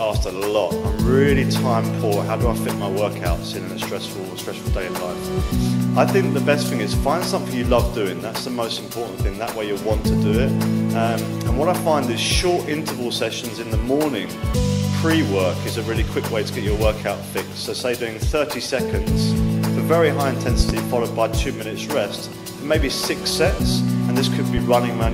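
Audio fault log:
20.60 to 20.72 s, loud pop: two sharp pops land in quick succession within about an eighth of a second, standing well clear of the surrounding level, while the sound keeps going underneath without a break. That double hit is the signature of a sudden voltage step, most likely from a plug, switch or static discharge, that gets pushed through the downstream circuitry, which shapes the spike into a pop.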